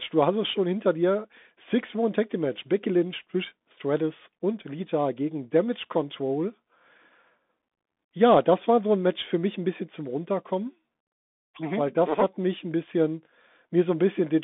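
From start to finish the speech passes through a Bluetooth CVSD headset codec, the narrowband link used by headsets. Its one-bit up-or-down coding with an adapting step cannot keep pace with loud, bright sounds, so s sounds turn scratchy and a granular hiss lies under the speech. The sound is confined to roughly 200 Hz to 3.6 kHz, which fits a 64 kbps CVSD link. A spectrogram shows a hard ceiling with nothing above 3.8 kHz, and the waveform shows coarse, grainy edges.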